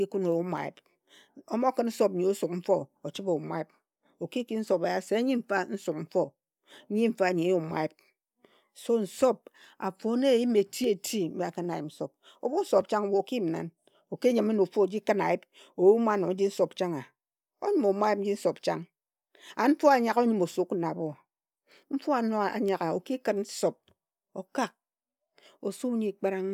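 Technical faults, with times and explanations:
0.58 s, 11.74 s and 14.85 s: dropped samples. Each is a single sharp click, the second between "eti mbi akhin a" and "yim nsop", the third between "ki nyime na ofu" and "khin ayip oyume". The likely cause is a tiny fraction of a millisecond missing from the stream, so the waveform jumps abruptly.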